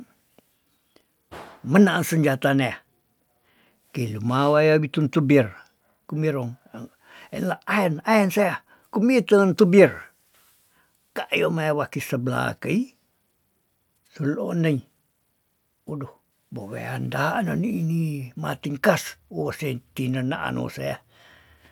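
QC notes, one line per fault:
No faults heard in this clip.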